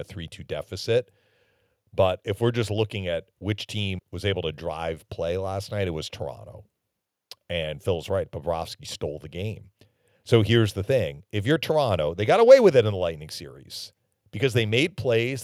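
No technical faults can be heard at any point in this speech recording.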